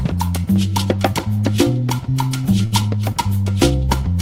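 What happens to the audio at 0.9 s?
Nothing goes wrong at 0.9 s; the sound carries straight through that moment with no dropout, click or other fault.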